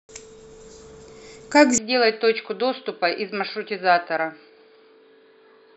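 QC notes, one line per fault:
1.78 s to the end, input switched to a poorer device: from 1.78 s on, the speech goes dull and a bit boxy, with nothing left above 4.9 kHz. It also drops a few dB in level and picks up a faint new background hiss of its own, well below the voice. There's no gap at the changeover; it just flips. That mix of narrower band, different tone and new noise floor points to the recording likely jumping mid-take to a lower-grade mic or a headset's call mode.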